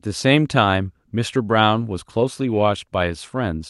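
Clock drift between sender and receiver runs through the whole clip: the sender's clock is roughly 4% slow, so the receiver's jitter buffer keeps draining. The receiver fills the shortfall by stretching the speech, which comes across as a slightly sluggish, uneven pace.

Repeated timing corrections run from 0.08 s to 3.55 s, about 96% of normal speed, repeating short slices that add roughly 150 ms in total. They are unevenly spaced and all lengthening, over audio carried by an Opus call path that reaches about 12 kHz.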